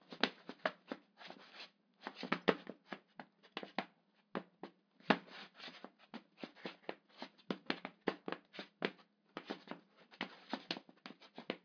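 No technical faults can be heard anywhere in this recording of sounds; the signal stays intact and steady throughout.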